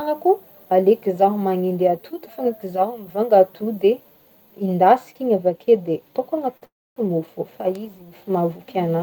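At 6.57 s there is a short stall from a late packet: the speech holds its last sound for about 42 ms, to 6.64 s, with a faint buzzy smear. The jitter buffer ran empty, and playback resumed from the same point, so nothing is lost. It is a brief hold, not a break.

Right after, from 6.66 s to 6.98 s, a call audio freeze stretches the sound into a fading buzz that falls to silence for about 260 ms, putting roughly 307 ms of added time into the speech. It was likely caused by packets held up in transit. The length and the silent stretch set it apart from the earlier stall.

At 7.75 s a bit error spike gives a single sharp tick across the whole spectrum. A flipped bit threw three consecutive samples far off their values before they snapped back. Unlike the stalls, no sound is held or delayed, and the tick has no relation to the speech around it.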